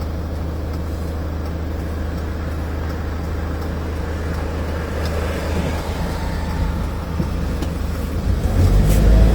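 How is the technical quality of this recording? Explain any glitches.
The quality is compromised by one fault, present throughout. Opus compression: tones sound grainy and rough. This is likely from low-bitrate encoding, around 24 kbps, where starved bands get filled with noise. The bandwidth still reaches about 20.1 kHz.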